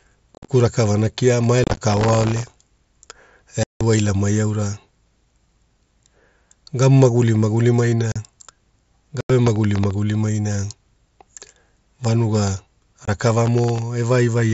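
It's a speech recording over a Bluetooth headset link with two separate problems. The first is unconcealed Bluetooth headset packet loss: short holes with hard, abrupt edges at 0.35–0.49, 1.64–1.78, 3.63–3.81, 8.12–8.16, 9.21–9.30 and 13.05–13.08 s. Lost packets between headset and phone were replaced by silence or an idle pattern rather than patched over. The first two are scattered dropouts over about 135 ms, so they sound chopped and crackly. The one at 3.63 s is a solid 0.17 s gap. The second problem is processor overload crackle, a gritty tearing at 1.88–2.72, 9.47–9.91 and 13.46–13.79 s. The processor kept missing deadlines on very small buffers, well under a millisecond each, and replayed stale audio each time. The first burst is the densest, with around a hundred misses. The mSBC wideband codec underneath adds only light graininess.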